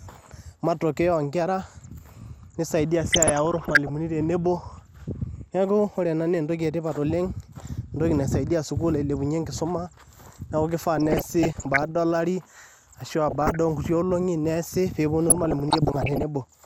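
A speech recording that sounds dull and plainly gurgly throughout, its upper frequencies thin and grainy. This is MP2 compression, most likely at a low bitrate of around 80 kbps, where upper sub-bands drop out and the remaining ones are coarsely quantised. Over this, DAB burbling bursts in at 3.04–3.96 s, 10.98–11.96 s, 13.28–13.57 s and 15.29–16.23 s. Bit errors at a rate of under one percent slipped past error correction, putting short blips of noise into individual sub-bands.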